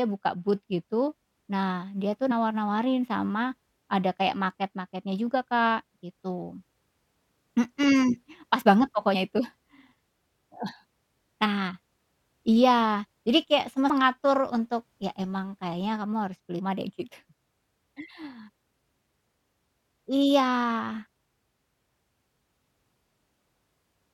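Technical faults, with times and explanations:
2.30 s (after "dia tuh"), 9.13 s, 11.45 s, 13.89 s (before "mengatur untuk ya emang"), 16.58 s (before "deh gitu"), damaged data in a compressed stream: brief chirps or blips interrupt the speech where corrupted frames made the decoder lose sync and hunt for the next valid header.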